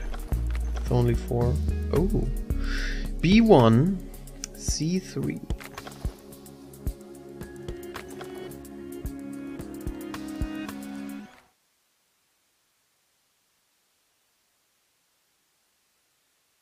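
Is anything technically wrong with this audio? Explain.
No, the signal shows no technical fault, and the smooth fade-out that begins around 11 seconds and finishes by 11.6 s tapers the level gradually, as an editor would, without a click or hard edge.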